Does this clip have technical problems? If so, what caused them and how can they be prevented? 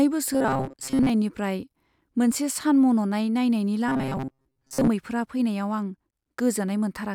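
Yes. Robotic sound from repeated short buffers appears from 0.33 to 1.10 s and from 3.88 to 4.89 s, just before "फैनायाव आं". The speech becomes a rigid metallic buzz at 133 Hz. The likely cause is audio arriving too seldom, so playback loops a roughly 7.5 ms chunk and skips most of the real signal. A spectrogram shows evenly spaced horizontal harmonics of 133 Hz, and the waveform shows an identical short cycle repeating. Larger, steadier buffering and a proper jitter buffer prevent it.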